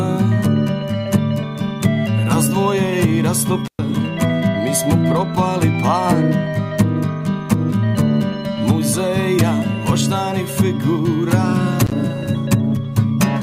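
At 3.65 s and again at 11.85 s, an intermittent contact briefly opens the line for 113 ms and 52 ms, dropping the sound with crackle at each edge and faint hiss underneath.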